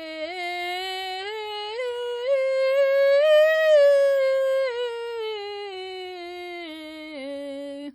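From start to finish the music carries heavy ringing and a washy smear, likely from WMA compression at a low bitrate near 32 kbps. Unlike steady background hiss, the noise breathes with the music, and nothing remains above 19.9 kHz.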